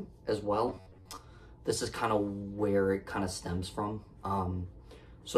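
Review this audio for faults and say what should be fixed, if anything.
From 0.68 to 1.18 s the sound turns into a rigid metallic buzz near 94 Hz, robotic sound from repeated short buffers, likely about half the audio replaced by repeats of an 11 ms chunk. Prevent it with a larger jitter buffer so playback never runs dry.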